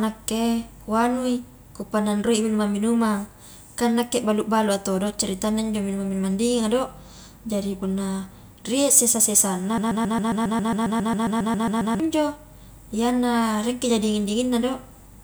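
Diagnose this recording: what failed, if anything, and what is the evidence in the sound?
A broken-record loop runs from 9.78 to 12.00 s. A 136 ms fragment of the speech repeats exactly, back to back, 16 times. The speech that belonged there is lost. The likely cause is a stalled playback or stream buffer resending its last fragment.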